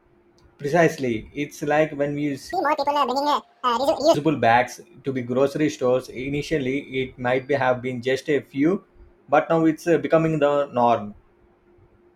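Audio read two samples at a time (double speed) runs from 2.53 to 4.14 s, after "like when we" and before "bags to the grocery". Sample pairs were read as single frames, so the speech plays at twice the speed, an octave (12 semitones) higher.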